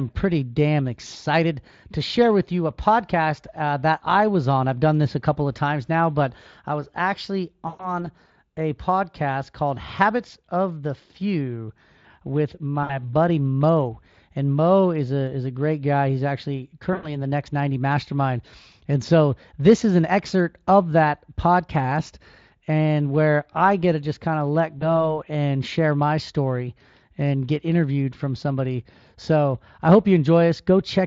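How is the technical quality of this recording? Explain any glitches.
The recording has four short glitches from VoIP packet loss concealed by the speech codec, at 7.67–8.04 s, 12.83–13.11 s, 16.93–17.25 s and 24.79–25.11 s. The gaps cover roughly 120, 60, 100 and 20 ms of missing audio. Instead of going silent, the decoder extends its last pitch and spectral shape, so the speech stretches into a buzzy tone or coloured noise that fades. Because each new frame depends on the previous one, the speech stays thin or distorted for a moment after packets return. That lingering smear, with no hard cut to silence, sets it apart from a plain dropout. The Speex coding underneath runs at 23.8 kbps and does only light damage.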